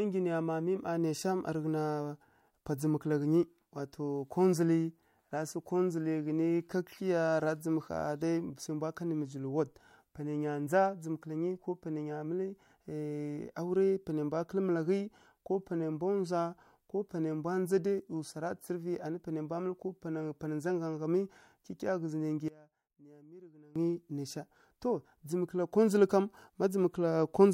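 One channel inverted, from 22.48 to 23.76 s in this speech clip, just after "nai nggyi": the voice suddenly drops by about 22 dB and turns faint. One stereo channel has likely flipped polarity, so the centred voice cancels when the channels sum to mono.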